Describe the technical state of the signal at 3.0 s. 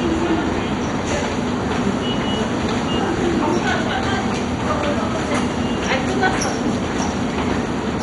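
At 3.0 s the signal shows heavy MP2 compression damage, present across the whole clip rather than at this moment alone. The sound is dull and carries a gurgling, granular grit, which points to a low bitrate around 56 kbps. Starved of bits, the likely MP2 encoder has switched off its upper sub-bands and coarsely quantised the rest. On a spectrogram, nothing appears above about 11.2 kHz, and the bands just below that edge blink on and off as blocky patches.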